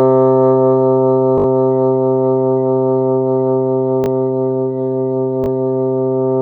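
A repeated buffer occurs at 1.38 to 1.46 s, then at 4.04 to 4.08 s and 5.44 to 5.48 s. New audio arrived late, so the last slice was replayed. Each repeat lasts about 20 ms, which fits a 20 ms buffer. The first plays four extra times, the others twice. Each is a brief buzzy stutter with hard joins. Almost no sound is lost.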